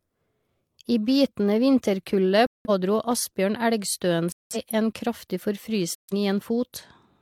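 Corrupt frames muted: the decoder rejected damaged compressed frames, so speech drops abruptly to silence from 2.47 to 2.70 s, 4.32 to 4.57 s and 5.95 to 6.14 s.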